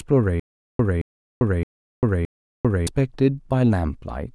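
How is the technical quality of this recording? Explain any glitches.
The speech has one clear glitch. From 0.40 to 2.87 s there is a stutter with silent gaps: a 222 ms burst repeats four times, every 618 ms, with 396 ms of dead silence between repeats. The likely cause is a stalled stream replaying its last fragment. Unlike a plain dropout, the same sound returns at an even pace, and the audio that should have played is missing.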